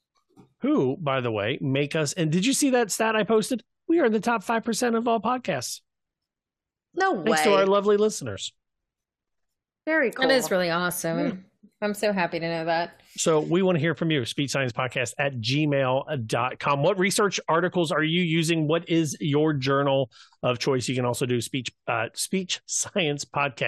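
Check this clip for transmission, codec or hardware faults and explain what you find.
No faults found; nothing audible in the speech points to a problem anywhere along the signal path.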